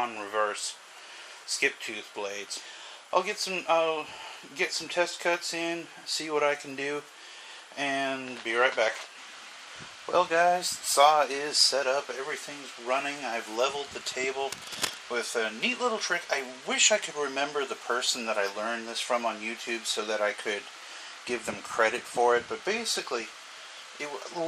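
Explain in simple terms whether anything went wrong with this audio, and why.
At 14.52 to 14.98 seconds, a burst of scratching and rustling noise sits over the sound for about half a second. It is nearly as loud as the audio itself. This is cable scratch noise, likely from a worn cable or plug being moved.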